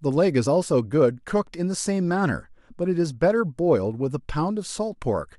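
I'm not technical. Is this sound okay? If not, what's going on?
No. Around 0.45 s, a piece of the compressed file went missing or was rejected as damaged, so the player skipped it. This is called compressed frames skipped. About one frame, roughly a fiftieth of a second of speech, drops out, so the speech jumps ahead.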